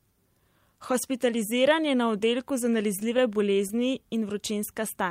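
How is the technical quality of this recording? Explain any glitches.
The recording has one cluster of glitches. Scattered short gaps occur between 3.00 and 3.80 s, just after "je na oddelku za": about five lost or late packets, each roughly 10 ms or less, were patched by extending the preceding sound. Around 50 ms in total is filled this way, about 7% of that stretch, and the concealment adds 8 ms overall. The result is brief ticks, smears and hiccups in otherwise clear speech.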